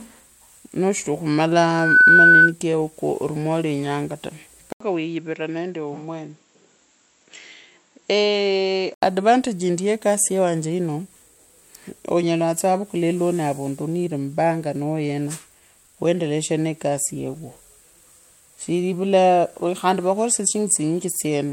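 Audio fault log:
1.68–2.52 s, loudspeaker feedback squeal: a 1.5 kHz tone swells over about a third of a second to roughly 10 dB above the speech, as the loudspeaker re-enters the microphone.
4.72–9.02 s, input switched to a poorer device: after an 80 ms gap, speech drops about 5 dB, loses everything above 7.6 kHz and gains faint noise, likely from a narrower-band microphone, starting at "advantage yindi ye kasi".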